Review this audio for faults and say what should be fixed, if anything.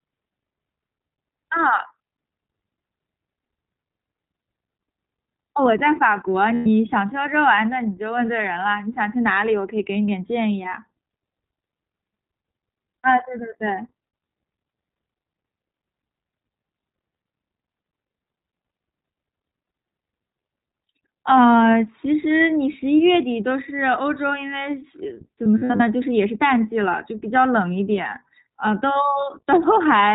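The iLBC codec colours the whole speech recording. On a spectrogram, energy stops at a hard ceiling near 4 kHz, with nothing above it for the full length. The voice sounds clear but slightly rough and synthetic, because each frame's excitation is coded independently. The texture fits iLBC's 15.2 kbps mode with 20 ms frames, and the damage is plainly audible. In the waveform, the loss shows as slightly grainy cycles rather than any visible break. To prevent it, use a wideband codec such as Opus at a moderate bitrate instead of narrowband iLBC.

Lost iLBC frames cause two dropouts. The first runs from 6.54 to 6.66 s and lasts 120 ms, consistent with about six consecutive 20 ms frames. The second spans 25.44 to 25.82 s, where about 200 ms of losses are scattered over 360 ms and the longest single run is roughly 70 ms. At each gap the decoder repeated the last pitch cycle blended with noise, so the listener hears a held, buzzy, breathy vowel. 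The voice returns almost immediately because iLBC frames stand alone. On the waveform, each gap appears as near-identical repeating cycles. On the spectrogram, it appears as flat, frozen harmonic stripes with a noisy haze. To prevent it, reduce packet loss with a larger jitter buffer, forward error correction or packet redundancy on the network path.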